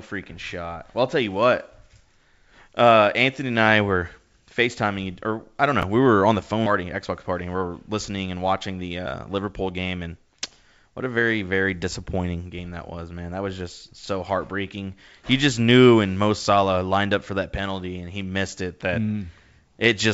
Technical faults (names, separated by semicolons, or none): chunks out of order; skip ahead; jitter buffer speed-up